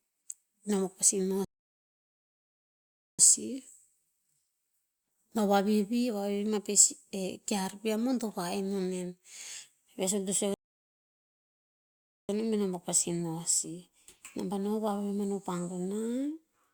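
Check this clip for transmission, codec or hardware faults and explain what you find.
Two playback stalls in the speech. At 1.45 s and again at 10.54 s, just after "suk to sue", the sound cuts out for about 1.7 s, then picks up where it stopped. That's likely the player running dry or getting blocked.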